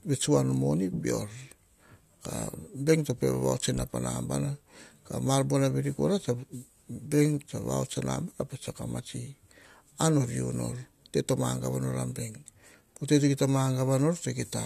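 Listening to this speech recording, nothing technical stood out at any point.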